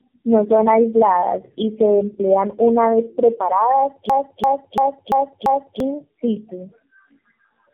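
A speech clip that has passed through tandem speech coding: three low-rate speech coders in a row, with G.711 stages between them. The result is rough, muffled and warbly, and a spectrogram shows a hard ceiling at about 3.5 kHz with smeared, patchy harmonics. From 4.10 to 5.80 s, right after "emplean una vez preparadas", a system hang loop repeats the same 341 ms fragment five times at about 2.9 Hz, a machine-gun stutter that fits a 16384-sample buffer replaying. The waveform shows identical repeated blocks, and about a second and a half of the original audio is lost.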